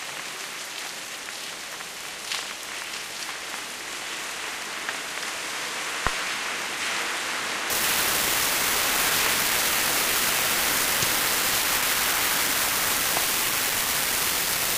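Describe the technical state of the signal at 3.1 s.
At 3.1 s the signal is intact, with no audible fault at that moment.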